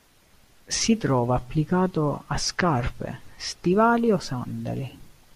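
From 1.19 to 3.71 s the speech carries a crude rate conversion, consistent with a 32 kHz to 48 kHz change made by linear interpolation without filtering. Error sits roughly 30 dB below the signal, a gritty inharmonic fizz riding loud and bright syllables; a spectrogram shows faint mirrored, non-harmonic lines above the real partials.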